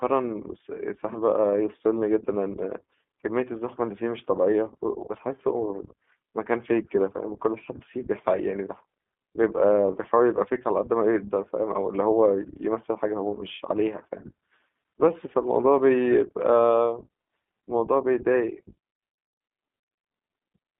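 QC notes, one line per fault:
Throughout, iLBC codec: content is confined to roughly 200 Hz to 3.5 kHz, so a spectrogram shows a flat ceiling and empty lows. Each 20 ms frame is coded independently, which fits the 15.2 kbps mode, giving the plainly audible rough, synthetic texture.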